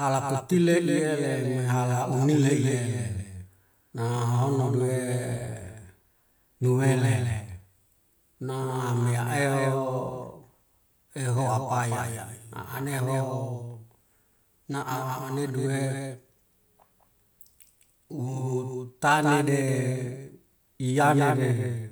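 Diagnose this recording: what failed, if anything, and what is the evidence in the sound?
The speech carries a doubled audio track from start to finish: every syllable returns once, roughly a fifth of a second later and only a few decibels quieter, at full bandwidth. Unlike room reverberation or acoustic echo, the repeat has no decay tail, no tonal colouring and no further reflections, just one clean, fixed-offset copy. That points to the routing or capture stage, most likely the same signal reaching the mix twice through a second, slower path.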